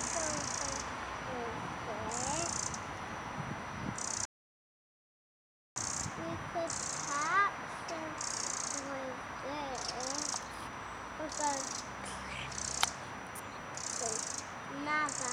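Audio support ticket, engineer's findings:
Audio dropout to silence, 4.25 s to 5.76 s. Sound cuts off mid-flow and returns abruptly after about 1.51 s. Gap is dead silent, no room tone or noise floor. Input likely lost upstream (disconnected device, failed link or stray mute) while the recorder or encoder kept writing silence. Content within the gap is unrecoverable.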